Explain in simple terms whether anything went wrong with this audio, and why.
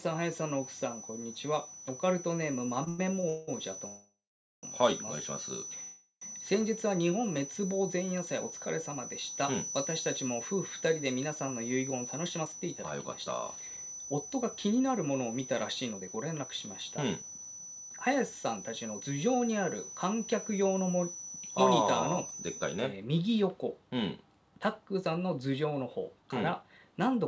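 Several faults can be heard, and they are described here in the order they first appear.

A feedback whistle runs from the start to 22.9 s: a thin, steady tone at 6 kHz sitting quietly under the sound. It is likely caused by a loudspeaker-to-microphone loop held just short of howling. Unlike a real howl, it never builds up, though it slowly swells and fades.

From 2.84 to 3.50 s there are repeated stalls (stutter). The audio hitches four times, the longest for about 0.19 s, so about half of that stretch is stand-in sound. Nothing is lost, but it drags in short jerks rather than one pause.

A call audio freeze happens at 3.88 to 4.65 s (0.75 s, mostly silent) and at 5.83 to 6.23 s (0.39 s). The last sound is stretched and fades, then playback resumes exactly where it stopped, likely because network packets were held up. This is one longer halt, not a string of short hitches.

A jitter buffer speed-up plays the sound faster to catch up after delays: 11.82 to 19.02 s at 108%, trimming about half a second; 21.15 to 21.52 s at 113%; and 24.79 to 27.23 s at 108%. 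The pitch stays the same, unlike a sped-up tape. The audio travels over a G.722 call link, which contains nothing above 8 kHz.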